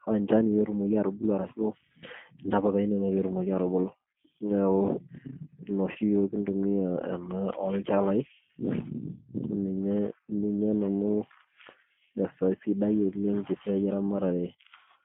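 Speech heard throughout with a narrow, slightly rough and synthetic quality, confined to roughly 150 Hz to 3.4 kHz with nothing audible above. The sound fits the G.729 codec, likely an 8 kbit/s G.729A stream, which rebuilds the voice from a vocal tract filter, pitch predictor and sparse pulses, so the coding damage is plainly audible. From 5.92 to 5.98 s the voice briefly smears into a fading, stretched extension before recovering. This is VoIP packet loss concealed by the speech codec: the gap points to a single lost 30 ms packet, which the decoder filled by repeating its last pitch and filter at falling gain, leaving the following frames weak until it resettled.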